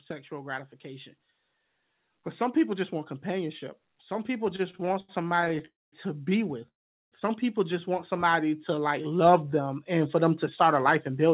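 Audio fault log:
2.37–10.46 s, automatic gain rising: starting at "start a life and", the gain climbs gradually by about 12 dB, so speech and background noise swell together. The waveform envelope widens steadily over these eight seconds, and the spectrogram's noise floor brightens along with the speech.
4.56–5.62 s, repeated stalls (stutter): playback halts 15 times, the longest wait 77 ms, with 275 ms filled, about a quarter of the span. Each stall repeats the preceding sound, so speech drags and catches. The spectrogram shows smeared repeated slices, and the waveform shows near-repeated cycles.
5.66–5.94 s and 6.68–7.14 s, call audio freeze: sound stops and then resumes where it left off. Each freeze has a brief fading continuation, then near-silence of about 200 ms and 410 ms. This is likely a network hold-up emptying the jitter buffer. Both appear as blank spectrogram columns and flat waveform gaps.
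8.16–9.99 s, jitter buffer slow-down: speech runs at 89% speed with unchanged pitch, adding 206 ms as the receiver repeats single pitch periods to rebuild its reserve. Sounds are drawn out. On the spectrogram, harmonics stretch horizontally, and on the waveform, near-identical cycles repeat. The call path's G.711 band limit leaves nothing above 4 kHz.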